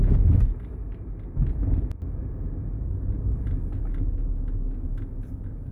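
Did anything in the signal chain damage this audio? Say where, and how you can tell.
Yes. A sudden gain jump runs from 1.92 s to 2.02 s: the level drops abruptly by about 8 dB and then returns just as abruptly about a tenth of a second later. You can tell it is a gain change and not a change in the sound itself because the background noise falls and recovers in exact step with everything else. There is no fade or ramp at either edge. That points to a digital gain stage, likely in the driver or processing chain, where a gain setting was applied instantly from one sample to the next instead of being smoothed.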